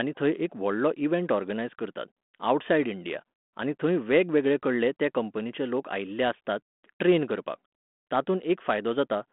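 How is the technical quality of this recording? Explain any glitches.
No glitches can be heard.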